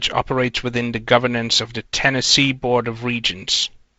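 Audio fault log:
No fault to log for this audio, which carries ordinary G.722 wideband telephone coding at 48 kbit/s with nothing above about 7.7 kHz.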